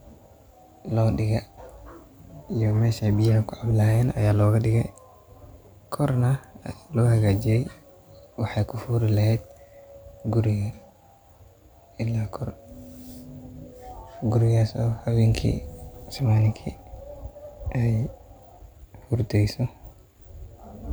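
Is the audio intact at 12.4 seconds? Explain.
Yes, at 12.4 seconds the speech runs on without any audible fault, so the audio is intact at that moment.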